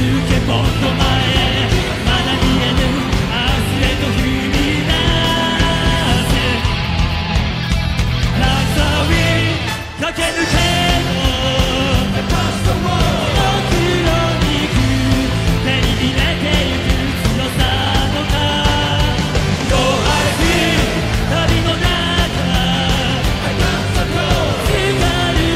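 No technical faults heard.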